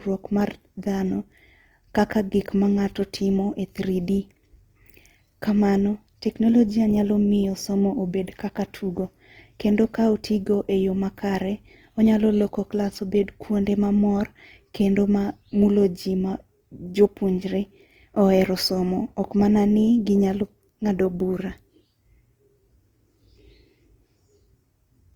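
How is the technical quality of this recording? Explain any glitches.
The recording has one clear problem running the whole way through: Opus compression damage that's plainly audible on the speech. From start to finish, the sound has a rough, grainy texture where the encoder ran short of bits and filled bands with folded or noise-like content rather than leaving gaps. The speech doesn't swirl much, but it sounds noisy and coarse. The bandwidth stays full, reaching about 20.2 kHz, at a likely bitrate around 24 kbps in music mode.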